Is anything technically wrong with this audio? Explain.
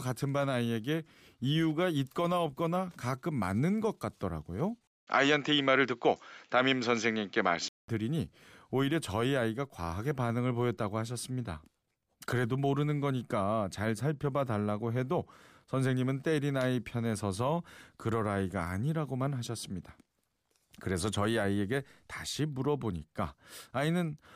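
Yes. From 4.87 s to 7.88 s, the speech drops out for about 200 ms and then returns duller and boxier, with nothing above 7.6 kHz, a level change of about 5 dB, and faint new background noise well below the speech. This is likely an input switched to a poorer device, such as a different microphone or a headset call profile, whose narrower band, different tone and own noise floor replace the original path until it switches back at 7.88 s.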